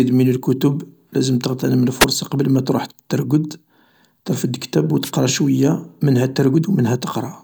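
Speech, marred by two wireless microphone noise hits. The first runs from 2.00 to 2.05 s. The second runs from 5.02 to 5.11 s. Each is a brief swish of static over the voice, roughly 50 and 90 ms long. The cause is an analogue FM radio link fading out. Reflected signals cancel the direct one at the receiver. Its noise floor then surges.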